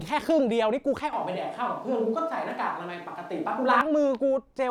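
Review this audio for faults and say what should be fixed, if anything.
The close microphone's signal likely dropped out and a distant microphone took over, a switch to a distant microphone from 1.13 to 3.81 s. The speech turns abruptly roomy and hollow with thinner bass at the same level, and room noise sits around 35 dB below it. Monitoring the close microphone during recording and checking its connection and battery would prevent the handover.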